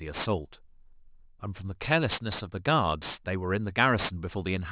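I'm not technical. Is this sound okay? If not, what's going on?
No. Throughout the speech there is aliasing: high sounds, such as s and sh, come out gritty and metallic. Everything above about 4 kHz folds back into wrong pitches, which fits a drop to an 8 kHz sample rate without filtering. Plain muffling would sound dull instead.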